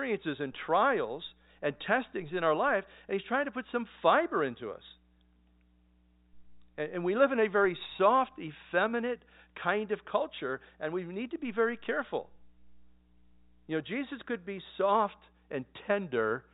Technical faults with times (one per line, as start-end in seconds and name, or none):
none